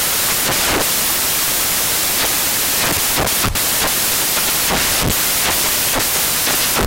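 Loud, dense white noise covers the speech from start to finish. These are samples built from the wrong bytes: the reader assembles each value misaligned or byte-swapped, so the rapidly changing low bits dominate.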